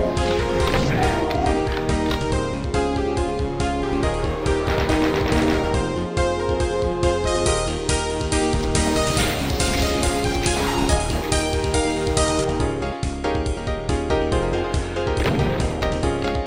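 From 7.27 to 12.44 s, pre-emphasis left on: an FM 75 µs treble lift was never undone, about 13 dB hotter at 10 kHz, rising steadily from around 2 kHz, unlike a narrow EQ peak.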